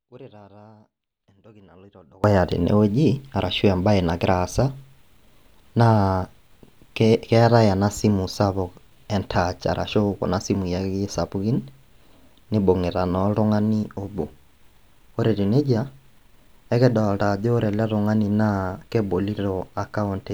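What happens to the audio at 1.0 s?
At 1.0 s the audio is in an audio dropout to a faint residue that is already under way when the clip begins and runs until 2.24 s. The signal likely cut out while the path stayed live, leaving only a faint leak around 30 dB down. On a waveform this appears as a thin sliver before full-level sound returns abruptly. A spectrogram shows a dim band.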